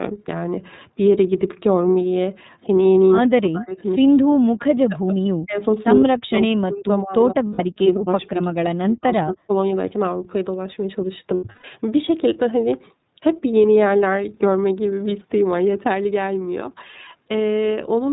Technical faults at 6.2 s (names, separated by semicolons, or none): iLBC codec; speech suppressed in double talk